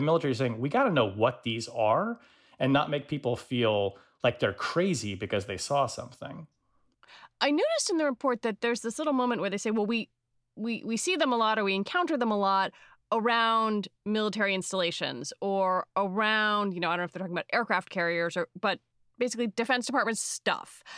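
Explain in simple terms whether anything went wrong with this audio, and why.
Nothing went wrong with this recording: the signal stays steady and unbroken, with no audible technical problem at any point.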